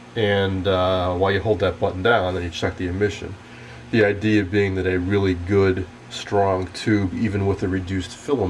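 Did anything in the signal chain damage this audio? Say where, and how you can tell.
No. Nothing in the chain damaged this audio.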